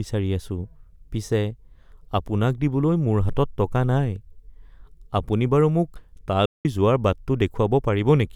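At 6.46 s the speech cuts out abruptly and the output stays silent until 6.65 s, a gap of about 190 ms, before the sound resumes. This is a playback stall, most likely the player running short of data or its audio thread being held up. On a waveform it shows as a flat line between two hard edges; on a spectrogram, a clean vertical blank band across all frequencies.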